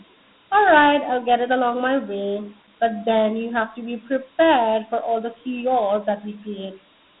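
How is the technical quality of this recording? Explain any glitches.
The technical quality is poor. The speech is narrow and gritty from start to finish, with one fault across the whole clip.

Throughout, the speech has a thin telephone-line sound, running from about 200 Hz to 3.7 kHz with nothing above 3.9 kHz, and a rough, gritty hiss that rides on every syllable. This is Dialogic VOX ADPCM, the OKI scheme used for phone menus and voicemail. It stores each sample as a 4-bit step from a prediction, which fits a 32 kbps stream. Those coarse steps leave audible quantisation grit, and the low sample rate caps the band.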